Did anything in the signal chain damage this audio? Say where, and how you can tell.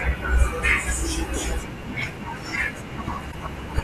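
Yes. A broken MP3 bit reservoir at the codec stage, likely from frames dropped out of the stream: the next frame reached back for borrowed data and decoded another frame's bytes. From 3.31 to 3.35 s the speech jumps ahead through a brief disturbance, under two 26 ms frames long.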